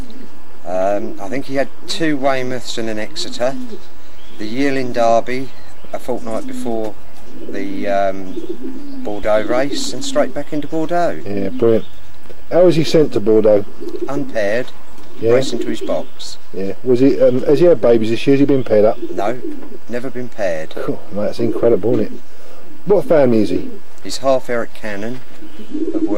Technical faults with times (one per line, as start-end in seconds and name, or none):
25.69-26.18 Bluetooth SBC bit pool drop